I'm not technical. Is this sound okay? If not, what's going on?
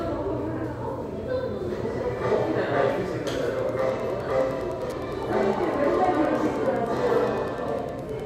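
No. From about 3.51 s to the end there's Wi-Fi interference: a faint, steady ticking roughly ten times a second. A nearby Wi-Fi radio sends a regular signal every 102.4 ms, and the audio circuitry picks it up and turns it into audible clicks.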